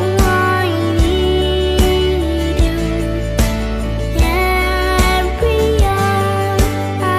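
Nothing stood out on listening; no technical faults could be heard anywhere in the recording.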